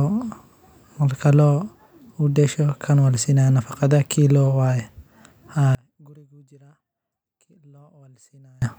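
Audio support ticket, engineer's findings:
Speech collapses to near-silence in mono from 5.75 s to 8.62 s, about 32 dB down. Likely one channel inverted: reversed polarity cancels the centred content on summing. Waveform: amplitude drops abruptly to a thin residue. Spectrogram: energy vanishes across the band, faint difference signal left.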